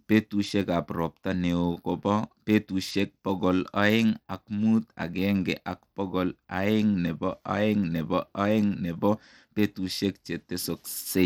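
Throughout, the speech likely went through Bluetooth SBC compression with a small bit pool, fitting 96 kbps; treble flickers out and gritty noise rides underneath.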